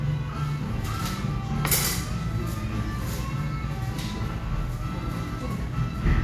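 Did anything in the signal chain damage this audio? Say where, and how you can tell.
No, nothing in this audio stood out on listening as a sign that any stage of the signal chain had damaged it.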